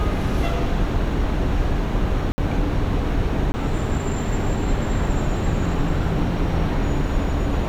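Two abrupt holes break up this recording of everyday sounds: a 60 ms dropout from 2.32 to 2.38 s, heard as a short gap, and a 20 ms one from 3.52 to 3.54 s. Both are blocks of digital silence, where runs of samples were replaced by zeros, typically because the output buffer wasn't filled in time. The signal drops out and returns with no fade, which usually puts a click at the edges.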